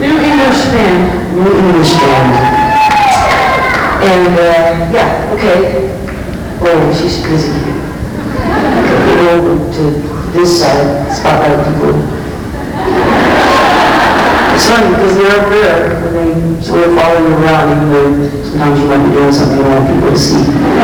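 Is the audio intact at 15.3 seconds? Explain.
No. Sample clock jitter runs throughout, including 15.3 s: an unstable converter clock, wobbling by a couple of microseconds, adds hiss that rises on loud, bright passages.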